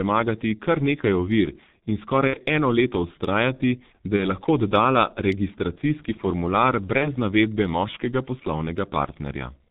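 A speech recording coded throughout with the G.723.1 codec, heavily damaged by it: nothing survives above 4 kHz, the voice is dull and hoarse, and consonants smear together. The coarse, grainy quality fits the low 6.3 kbit/s mode. Unlike a plain low-pass filter, which would only muffle the sound, this codec rebuilds the voice from a slowly updated model, so transitions blur and roughness persists even in vowels. VoIP packet loss concealed by the speech codec also occurs three times: 2.27–2.37 s, just before "eno leto"; 4.17–4.33 s; and 6.98–7.12 s, just before "navedbe moškega". In each case the decoder stretches the last sound into a buzzy tone or coloured noise that fades instead of cutting to silence, and the weakened voice recovers only gradually after each gap. The first gap fits two lost 30 ms frames and the other two a single frame each, which sets these apart from a clean dropout or a click.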